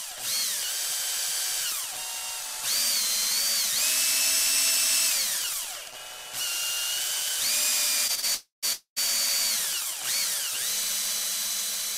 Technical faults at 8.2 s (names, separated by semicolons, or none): short stall from a late packet